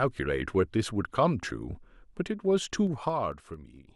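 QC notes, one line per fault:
2.76–3.77 s, zipper noise: the level drops by roughly 15 dB in unsmoothed 3 dB steps, about four per second, so each jump lands as a small click and the fade is heard as a ticking that rides on the speech until it settles.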